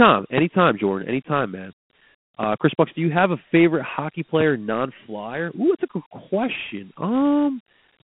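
Right from the start the whole clip has that Dialogic VOX ADPCM sound, the 4-bit phone-system codec squeezing speech into a narrow line band of roughly 150 Hz to 3.4 kHz, with nothing at all above 3.8 kHz. The grit and hiss riding along with the voice are plainly audible, and the texture fits a 32 kbps stream. Because each sample is stored as a coarse step from the last one, the quantisation noise follows the speech around.

Then there are three loud pops, each a single sharp click lasting about 25 ms while the speech carries straight on underneath. The first, at 0.38 to 0.41 s, is the hardest, peaking about 20 dB over the signal. The second, at 2.43 to 2.46 s, is about 15 dB up. The last, at 4.41 to 4.43 s, just after "have a favorite hockey", is about 10 dB up. Each is likely a voltage spike from a switch, plug or static discharge getting into the line.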